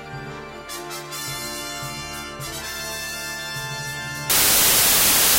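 Samples built from the wrong bytes, from 4.30 s to the end: each value's bytes are misassembled, so noisy low bits dominate, producing a burst of loud, harsh broadband noise.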